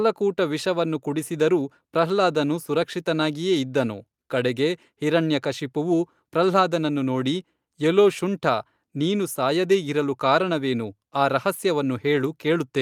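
Listening to this speech recording, nothing stands out as a technical problem anywhere in it.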